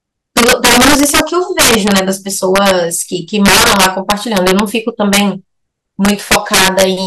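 Integer overflow cracks through the speech at 0.37 to 1.20 s, 1.59 to 1.99 s, 2.56 to 2.71 s, 3.46 to 4.60 s, 5.13 to 5.20 s and 6.05 to 6.84 s. The signal is driven about 2 to 8 dB past full scale. Peaks wrap to the opposite sign instead of limiting. Each sounds like a violent crack, harsher than clipping.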